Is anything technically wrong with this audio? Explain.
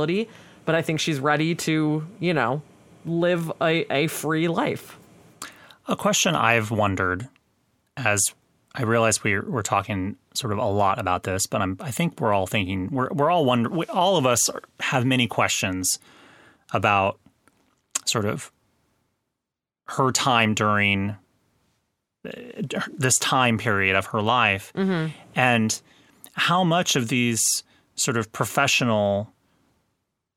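No, nothing stood out as technically wrong when listening to this recording.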